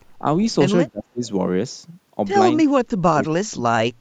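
From 0.88 to 1.24 s, and again from 2.64 to 3.85 s, the speech drops away (about 30 dB, then about 40 dB): speech suppressed in double talk, likely an echo canceller muting the talker during far-side speech. The waveform visibly shrinks and spectrogram energy fades.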